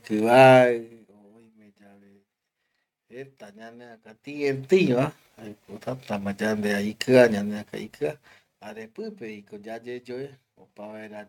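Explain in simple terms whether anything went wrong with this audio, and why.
Nothing went wrong with this speech recording that a listener can pick out. Where the volume rises or falls, it does so gradually, the way a fader is meant to work.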